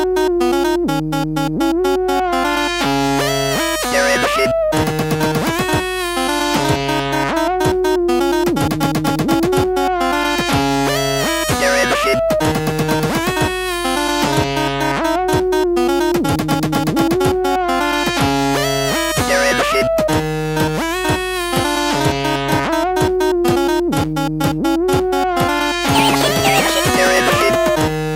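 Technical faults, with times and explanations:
Throughout: mains hum. A steady low tone at 50 Hz sits under the whole clip, with some low harmonics above it. It is fairly prominent, roughly 20 dB below the sound. Power-line current is leaking into the signal, through a ground loop or a nearby transformer.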